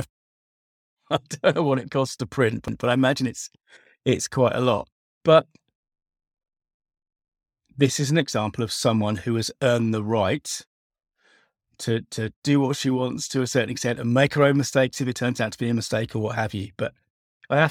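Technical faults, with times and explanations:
2.68 s, CD skip: Right after "what it costs to" there's a tiny tick, a mute of roughly 5 ms, and then it picks up mid-flow at "I imagine it's it's". A knock or disc flaw sent the laser onto a different turn of the spiral, so the sound jumps rather than running on.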